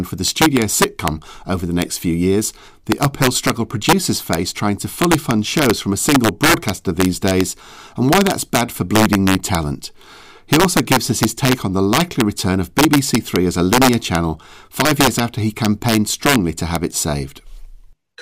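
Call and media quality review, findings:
Integer overflow throughout speech. Loudest peaks crack violently, harsher than clipping. Gain about 3 dB past full scale wraps samples to opposite sign. Roughly half a percent of samples affected.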